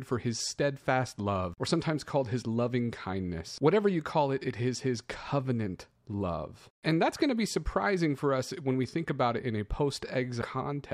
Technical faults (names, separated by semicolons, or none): damaged data in a compressed stream